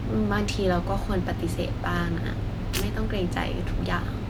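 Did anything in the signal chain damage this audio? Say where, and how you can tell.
No, nothing in the signal chain damaged this audio.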